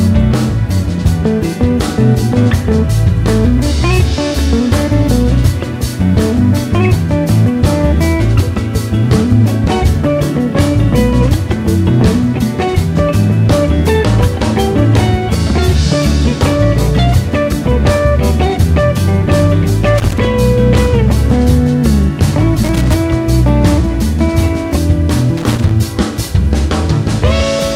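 Loose connector crackle appears three times late in the clip. The first burst runs from 19.98 to 20.18 s. The second runs from 22.63 to 22.96 s. The third runs from 25.37 to 25.71 s. Each lasts between about 0.2 and 0.34 s. A worn or dirty contact is making and breaking as it shifts. The audio is chopped on and off, and any DC on the line turns into pops. Each burst sounds like irregular scratchy crackle.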